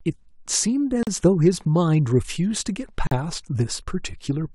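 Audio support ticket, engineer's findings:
Gap at a join of encoded pieces. Speech drops to silence at 1.03 to 1.07 s (about 40 ms) and 3.07 to 3.11 s (about 43 ms), two seconds apart. Edges smeared. Speech resumes where it stopped. Cause: two-second pieces encoded separately, joined untrimmed, leaving start-up delay and last-frame padding in.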